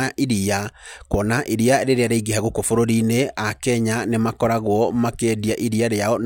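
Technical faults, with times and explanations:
Nothing stood out as a technical problem on listening to this speech.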